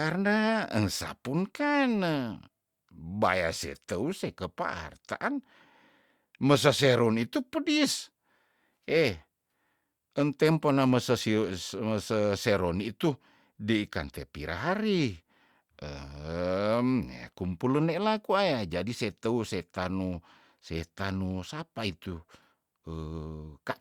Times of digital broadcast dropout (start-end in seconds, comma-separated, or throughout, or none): none